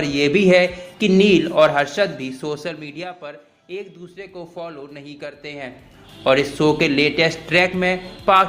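From 2.04 to 3.16 s, zipper noise: an unsmoothed fade of about 20 dB in 1 dB steps, around thirty per second, shows as waveform stair-steps and vertical spectrogram ticks.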